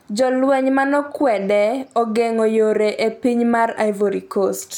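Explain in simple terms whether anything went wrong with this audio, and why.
Nothing went wrong; the recording has no faults.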